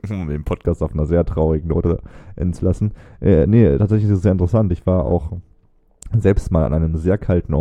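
From 0.66 s, right after "um den", de-emphasis applied wrongly rolls the treble off smoothly, about 11 dB down at 10 kHz, dulling speech; spectrograms show the upper bands fading.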